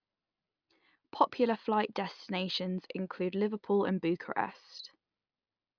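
Listening to the speech carefully, nothing technically wrong stood out at any point.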